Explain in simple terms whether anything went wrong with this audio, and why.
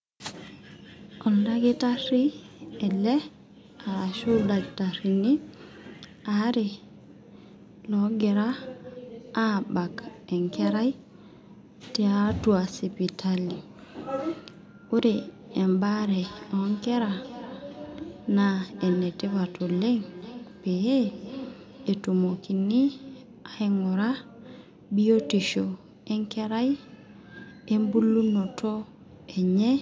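From 15.5 to 22.7 seconds there is feedback echo between two devices: a second device replays the speech into a nearby microphone, so each word returns about every 0.4 seconds.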